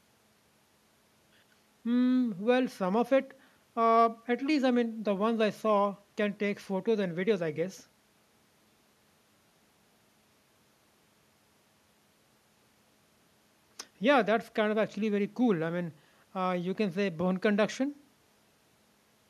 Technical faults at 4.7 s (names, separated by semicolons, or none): none